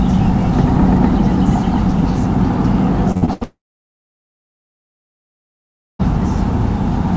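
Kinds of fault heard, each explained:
Repeated packet loss (robotic sound): from 3.12 to 3.43 s, four short holes, the longest 77 ms, are filled by extending the preceding sound, so over half that stretch sounds choppy. A spectrogram shows smeared, repeated frames with abrupt edges; the waveform looks chopped.
Long network dropout: at 3.43 s the audio becomes a short fading buzz, then near silence until 6.01 s, when it resumes with that part missing. The likely cause is packets failing to arrive. A spectrogram shows a brief smear then a blank band; the waveform flatlines.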